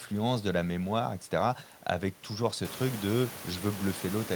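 The speech signal shows no technical faults, and the only change is in the room's own background noise, which rises by about 14 dB around two and a half seconds in yet stays about 15 dB below the speech.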